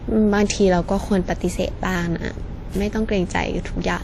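From the start, the speech carries plainly audible transform-codec damage, most likely WMA compression. Quantisation noise is smeared over long blocks, so the sound rings and a washy hiss rises and falls with the signal. Weak spectral detail has been zeroed, which fits a low bitrate around 48 kbps, and nothing is present above 19.3 kHz, where the encoder's band limit cuts off.

At 1.41 s the playback abruptly runs about 6% fast, raising the pitch by 100 cents, a full semitone, until 1.95 s, when it snaps back to normal. This drift correction step likely comes from clock-matching software that changed the playback rate in one jump to rebalance its buffer. Speed and pitch move together, so the voice sounds briefly detuned and hurried.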